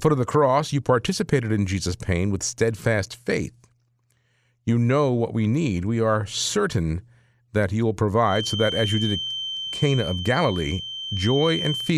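Right after "certain that you will" at 8.21 s, a steady 3.1 kHz feedback whistle sits about 10 dB down until the end, likely a speaker-mic loop teetering near runaway.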